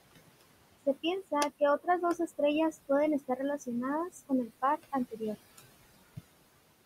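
Throughout the clip, the background noise drops away between phrases and swells back under the speech. These are noise suppressor artifacts: frame by frame, bands judged to be steady noise are pulled down by about 20 dB. The room noise sits about 17 dB below the speech.

From 0.86 to 2.39 s, then 2.72 to 3.68 s and 4.1 to 5.6 s, soft consonants and word tails sound swallowed or faint. In each span roughly a third of a second in total is affected. This is speech cut by the noise suppressor, which mistook those quiet parts for noise and lowered them by about 19 to 21 dB.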